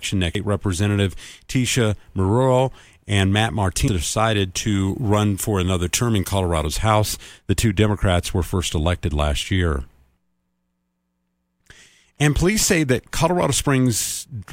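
At 0.35 s and again at 3.88 s the speech is broken by a brief glitch, each a moment of damaged data in a compressed stream. Bad bytes at those points leave the decoder unable to read the frames, so it loses sync and hunts for the next valid header. On a spectrogram each shows as a thin vertical smear of odd broadband energy. The waveform shows a brief discontinuity where the signal jumps.

From 4.67 s to 6.67 s the sound turns thin and hissy, with sharp sibilants: pre-emphasis left on. The treble lift follows the CD 50/15 µs curve, which is meant to be reversed by a matching cut on playback. Here that cut was never applied, so 10 kHz sits about 8 dB higher relative to 1 kHz. A spectrogram shows that two-second stretch noticeably brighter above a few kHz, and the waveform looks spikier on fricatives.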